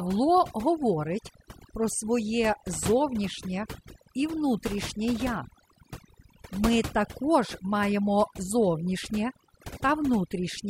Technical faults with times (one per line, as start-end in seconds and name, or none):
0.00-10.70 overdone noise removal